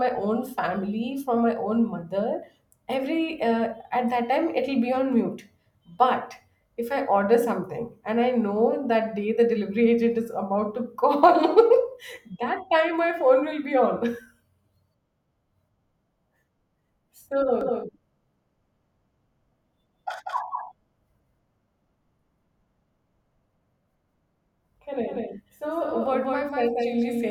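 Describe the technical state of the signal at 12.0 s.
At 12.0 s the audio is intact, with no technical fault audible at that moment.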